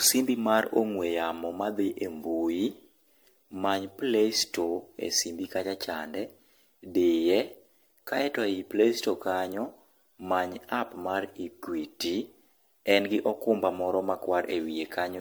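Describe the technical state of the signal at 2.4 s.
At 2.4 s the speech has generation loss, as it does throughout. It sounds swirly, hollow and smeared. That likely comes from roughly ten MP3 passes near 100 kbit/s.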